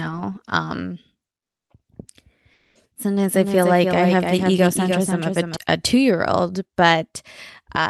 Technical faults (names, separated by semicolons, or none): comfort noise in place of the background; doubled audio track